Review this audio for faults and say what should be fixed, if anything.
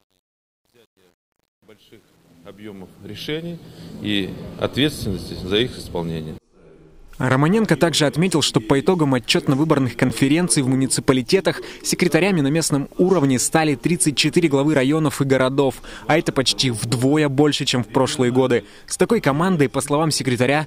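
The fade-in over the first 4.05 s has truncation distortion: it sounds gritty from 0 to 3.03 s, consistent with a gain stage keeping about 9 bits without dither. Keep full precision through the fade and dither at the final word length.

Around 10.09–10.11 s, chunks are out of order: one 10 ms chunk plays a chunk late, causing a brief jumbled moment. Make the buffering or writing path preserve sequence order before output.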